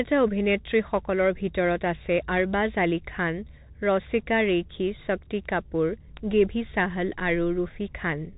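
From start to finish the speech carries the plainly audible sound of a Bluetooth CVSD headset codec. Nothing passes above 3.8 kHz, so the voice sounds boxed-in and telephone-like. The grainy texture fits a 64 kbps stream that encodes each sample as a single up-or-down bit with an adapting step size. When loud, bright passages climb faster than that step can follow, they smear and distort. S sounds come through scratchy, and a fine granular hiss sits beneath the speech. On a spectrogram the energy stops at a hard ceiling near 3.8 kHz, with speckled noise filling the band below it.

At 5.46 s there is a bit error spike. One stored bit has flipped, throwing the sample value off by a power of two before it snaps straight back. You hear it as a single sharp tick with no connection to the speech around it. In the waveform it appears as a lone vertical needle, which fits a single corrupted sample. 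On a spectrogram it is a thin vertical line running through every frequency.

At 6.17 s a second bit error spike appears. This one looks like a short burst of about three samples in a row. The tick is just as abrupt and unrelated to the signal. The waveform shows a narrow cluster of jumps away from the surrounding trace, and the spectrogram shows another full-height vertical stripe.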